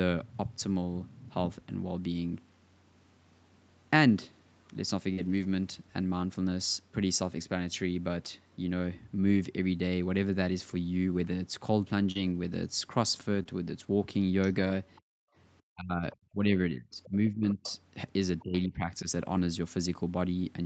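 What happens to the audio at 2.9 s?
Nothing goes wrong at 2.9 s: the speech there passes through intact, carrying only the ordinary band limit of the call path, with no content above about 8 kHz.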